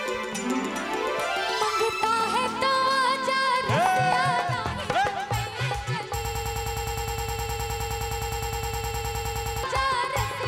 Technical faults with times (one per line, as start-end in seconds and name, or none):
6.25-9.63 broken-record loop